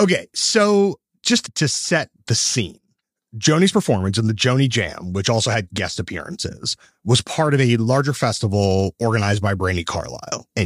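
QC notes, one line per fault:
No faults found in this clip.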